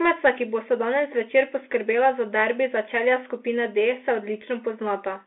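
A Bluetooth CVSD headset codec squeezes the speech throughout, passing roughly 250 Hz to 3.4 kHz. It leaves nothing above 3.8 kHz, with scratchy sibilants and a granular hiss.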